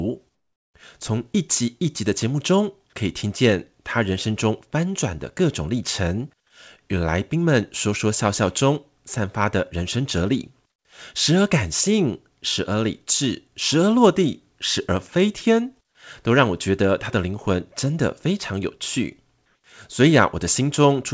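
From 19.46 to 19.64 s the sender has likely stopped transmitting during a pause, so the receiver fills those 180 ms with comfort noise in place of the background. The faint room sound, about 58 dB below the loudest passages, becomes a smooth, featureless hiss about 5 dB different in level, with nothing above 8 kHz, as on the rest of the call path.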